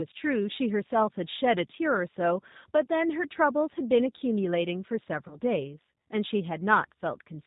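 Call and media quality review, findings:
Whole clip: rough, slightly synthetic speech, band-limited with nothing above 4 kHz, plainly audible codec damage. G.729 codec, consistent with 8 kbit/s. Speech rebuilt from a vocal tract filter, pitch predictor and sparse pulses per 10 ms frame.

5.28–5.37 s: about 30 ms of speech stretched into a buzzy tone or coloured noise that fades, then briefly weak or distorted after. VoIP packet loss concealed by the speech codec, fits one lost packet. Decoder extrapolated last pitch and filter with decaying gain.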